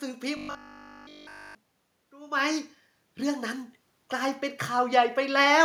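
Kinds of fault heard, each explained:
Robotic sound from repeated short buffers: From 0.37 to 1.55 s the speech collapses into a rigid, metallic buzz pitched at 50 Hz. The likely cause is new audio arriving too seldom, so the same 20 ms segment is replayed over and over while the real signal is skipped. In this stretch essentially everything heard is repetition. On a spectrogram this shows as a dense comb of harmonics spaced 50 Hz apart. The waveform repeats itself exactly every 20 ms.
Automatic gain rising: From 2.1 to 5.52 s the level climbs gradually by about 6 dB. The gain control is reacting to an input that fell by about 16 dB when the talker moved away around 2.0 s, and it is slowly pushing the gain back up. Voice and room noise swell together rather than the voice alone. On the waveform the envelope widens steadily over more than a second. On a spectrogram the noise floor brightens between phrases as well.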